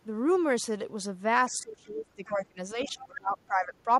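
A speech clip in which an echo canceller likely could not tell the talker apart from loudspeaker echo while both sides spoke, and turned everything down. This speech suppressed in double talk shows up between 1.49 and 2.59 s, where the voice dips by as much as about 25 dB for roughly a second, and again between 2.85 and 3.88 s, with drops of as much as about 20 dB over roughly 0.7 s of that span. From 2.25 to 2.45 s, the canceller likely failed to clear all of the loudspeaker signal from the microphone, so the other side's voice leaks through as a short faint scrap about 25 dB below the talker.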